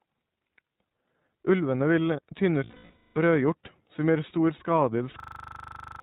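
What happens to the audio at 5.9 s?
At 5.9 s the audio is stuck in a system hang loop. It runs from 5.2 to 6.0 s. The system froze while the hardware kept replaying one 40 ms stretch of its buffer. That slice repeats at 25 Hz as a machine-gun stutter. About 0.7 s of real sound is lost.

Under the stutter, the iLBC codec damage present throughout is plainly audible. This narrowband VoIP codec codes each 20 ms frame on its own and passes nothing above 4 kHz. The speech sounds clear but rough and synthetic, which fits its 15.2 kbps mode.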